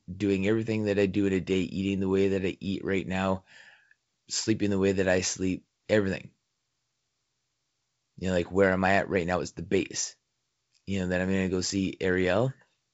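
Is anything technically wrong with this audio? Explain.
No, nothing is technically wrong.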